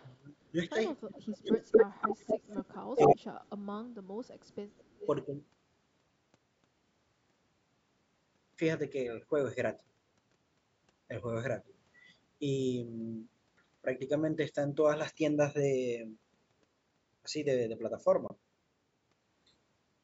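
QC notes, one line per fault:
0.00 to 5.07 s, echo leak: A delayed, ghostly copy of the speech appears at 0.00 to 0.15 s (about 261 ms late, about 30 dB down), 1.48 to 2.78 s and 2.97 to 3.10 s (241 ms late, about 5 dB louder than the speech itself), 3.58 to 3.77 s (about 25 dB down) and 4.26 to 5.07 s (about 20 dB down). The likely cause is a loudspeaker on the far end whose echo canceller let part of its microphone pickup through and sent it back. On a spectrogram the harmonic tracks show a second, time-shifted set lagging the originals by about a quarter second. In the waveform, the loud stretches around 1.5 to 3.1 s look doubled and smeared rather than clean.
0.52 to 3.56 s, speech suppressed in double talk: The talker's level is pulled down while the other side is also active. At 0.52 to 0.58 s there is a shallow dip of about 5 dB. At 1.00 to 2.02 s it drops by up to about 25 dB for roughly a second, and at 2.94 to 3.56 s by up to about 35 dB for roughly half a second. 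This is likely an echo canceller that could not tell the local talker from the loudspeaker echo and attenuated both. The waveform envelope sags or collapses in these spans, and the spectrogram fades toward darkness.
18.28 to 18.32 s, Bluetooth dropout: The output cuts to silence for about 23 ms. When it returns, the sound has jumped ahead rather than picking up where it stopped, with about 23 ms of audio missing. That gap fits a single lost frame. The likely cause is a packet that reached the headphones too late to play. The waveform shows a flat-line hole, and the spectrogram shows a clean vertical blank strip across all frequencies, which stop at 8 kHz here as expected from the call's microphone processing.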